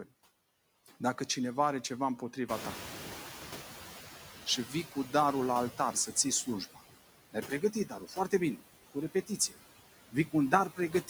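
Noise suppressor artifacts run through the whole speech clip: the suppressor pulls steady background down by about 10 dB frame by frame. On a spectrogram the noise floor looks patchy and flickering rather than smooth.

At 2.48 s, after "cineva are ceva", the room noise jumps by about 17 dB, and the noise suppressor is still catching up. Its estimate lags for about 1.6 s, so the noise first comes through loud, then sinks by about 9 dB by 4.11 s, just before "și vii". A waveform shows the floor stepping up, then tapering down.

Speech is cut by the noise suppressor at 7.33–8.33 s, just before "bine cu", then at 9.14–9.54 s, 10.12–10.34 s and 10.7 s to the end. Quiet speech is mistaken for noise and dropped by about 11 to 16 dB, for roughly 0.4 s at first and then in brief snatches. The cut speech sounds swallowed or faint. Spectrograms show those energy holes.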